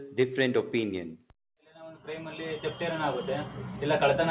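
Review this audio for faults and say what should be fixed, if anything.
Sound cut by the noise suppressor, 1.17 to 1.32 s: the suppressor mistook this sound for noise and pulled it down by up to about 19 dB. To prevent it, make the noise suppressor less aggressive or tune its noise estimate so that sound like this is not classed as noise.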